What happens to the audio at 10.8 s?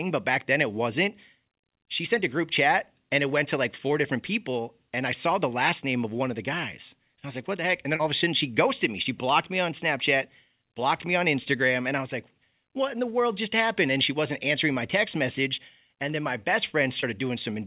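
Nothing goes wrong at 10.8 s: the speech there carries on intact through the call path, with the narrow telephone bandwidth that leaves nothing above 4 kHz and no dropout, glitch or other disturbance at that moment.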